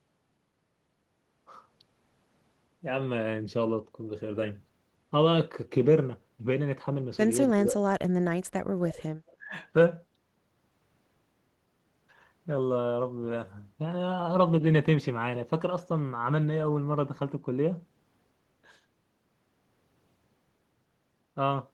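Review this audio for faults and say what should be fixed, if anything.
Speech suppressed in double talk shows up at 7.55–7.81 s, with a dip of about 15 dB, and again at 9.38–9.52 s, dropping about 25 dB. The voice ducks while the far side talks, likely because the echo canceller mistook it for loudspeaker echo.

An echo leak appears at 9.27–9.36 s as a faint delayed copy of the voice, about 35 dB down and trailing by 289 ms, likely from loudspeaker pickup the far end's canceller missed. The fixed lag distinguishes it from room reverberation, which smears continuously instead of repeating.

Better double-talk detection in the canceller, plus a headset or better acoustic isolation at the far end, would prevent both faults.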